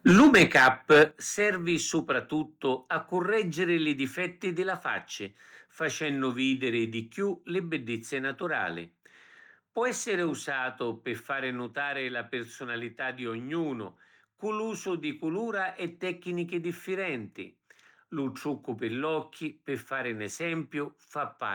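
Microphone overload runs from 0.06 to 1.03 s. The speech peaks are flattened, with about a tenth of the waveform squared off and the loudest moments pushing roughly 5 dB past the converter's ceiling, giving a harsh, crackly edge. The likely cause is input gain set too high for the talker.

Microphone volume stepped down at 0.11 s and again at 1.11 s. Speech and background drop together, by about 3 dB and then by about 9 dB, each as a single sudden step. This is likely the call software cutting the device's input level after detecting the overload.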